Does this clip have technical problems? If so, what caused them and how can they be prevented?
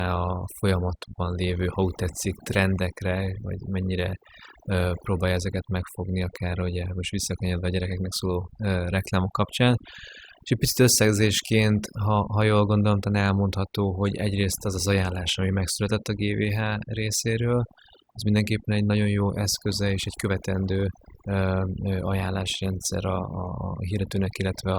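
Yes. Throughout the clip, overdone noise removal: a noise reducer set too aggressively cut away frequency bands near its noise estimate, taking quiet speech detail too, so the background drops and breaks up into twinkling specks. Using gentler reduction settings prevents this.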